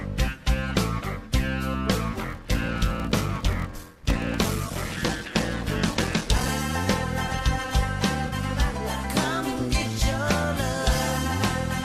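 From 2.11 to 6.50 s there's a block size mismatch (padded): one stage hands over shorter blocks than the next one reads, and each block's leftover gets filled with zeros. The result is a buzz at about 41.7 Hz, the block rate, and the sound running slow at 0.889 times normal speed. That ratio fits 1024-sample blocks being read as roughly 1152, so a short silent gap lands in every block.

At 8.27 to 8.34 s there's a corrupt frame concealed. Two frames, about 66 ms in all, arrived with flipped bits. The decoder caught it and papered over the damage itself, either by muting those frames or by filling them with a sign-scrambled copy of the last good spectrum. Either way, the original audio for that stretch is gone, and what you get instead is a brief covered-over patch about as long as the two damaged frames.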